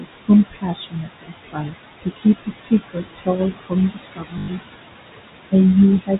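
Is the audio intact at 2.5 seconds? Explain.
No. From 2.43 to 2.72 s the noise suppressor cuts speech: it misreads part of the talker's energy as steady background and turns it down with the noise, dipping by up to about 17 dB. Roughly a fifth of a second of sound comes out swallowed and faint.

Noise suppressor artifacts are also present at this point. The suppressor pulls the background down by about 19 dB, frame by frame, so the residual noise pumps against the speech and can warble.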